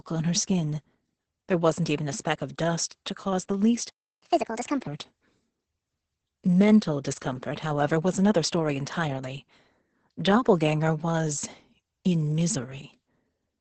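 Speech here has passed through Opus voice compression running its SILK linear-prediction coder at a very low rate, which fits roughly 10 kbps in wideband mode. The encoder spends so few bits that the excitation is coded coarsely and the band is cut off, with nothing above about 8.6 kHz. The result is heavy damage throughout: the voice sounds muffled and hoarse, with a faintly robotic edge and lost crispness in the consonants.

At 3.90 s, right after "to cause the least", a playback stall occurs. The player most likely ran short of data or had its output thread held up, so it fed nothing to the output. The sound drops out in mid-phrase and stays silent for about 0.32 s, until 4.22 s, before resuming where it left off.

From 4.22 s to 4.87 s the player then performs a catch-up at higher speed, resampling its backlog to win back some of the lost time. The audio runs at 1.5 times normal speed, and because resampling shifts pitch along with tempo, the voice jumps up by roughly seven semitones and sounds hurried and chipmunk-like. 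At 4.87 s it settles back to its natural rate and pitch.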